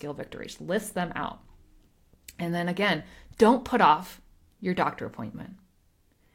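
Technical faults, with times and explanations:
No technical faults detected.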